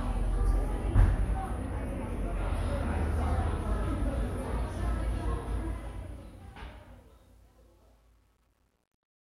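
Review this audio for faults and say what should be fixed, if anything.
Truncation distortion on a fade: from 5.44 s the fade-out drops low bits without dither, which fits a 10-bit stage, so 6.51 to 9.33 s turns gritty. Running the fade at higher resolution and applying dither before any word-length reduction would prevent it.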